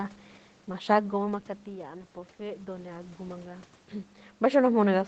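From 1.65 s to 4.21 s, the speech and the room noise behind it swell together, slowly climbing by about 4 dB over roughly two and a half seconds. This is automatic gain rising. The level reaching the microphone had fallen by about 11 dB, as the talker moved away from it around 1 s, so the gain control judged the input too quiet and eased its gain upward, lifting the background along with the voice.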